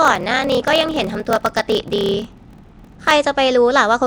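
From the start to 3.13 s, a block size mismatch (padded) chops the speech with a steady buzz at 38.3 Hz. One stage hands over blocks that are short of what the next stage reads, and the difference is filled with silence. That fits 1024-sample writes into blocks of about 1150 samples. The inserted gaps stretch the speech to 0.889 times normal speed while the timbre stays put. A waveform shows evenly spaced flat dropouts, and a spectrogram shows thin vertical stripes at that rate.

Across the whole clip there is a rough, hissy halo and a smeared, underwater character, most likely from Nellymoser compression at around 44 kbps. The coder gives no bits to quieter bands and fills them with noise, so the detail turns grainy. On a spectrogram the energy looks blotchy and speckled rather than showing clean harmonic lines.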